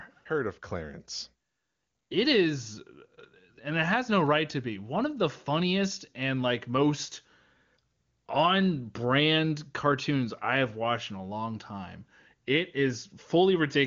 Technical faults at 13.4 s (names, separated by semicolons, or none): none